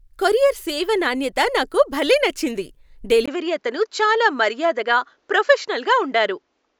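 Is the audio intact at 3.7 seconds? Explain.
No. From 3.26 s to the end, just after "నాణ్యత నాకు భలే నచ్చింది", a brief 20 ms gap leads into sound with nothing above 7.6 kHz and a faint new noise floor at about the same level, likely an input switched to a poorer device. That gap and the changed background set it apart from a plain bandwidth drop.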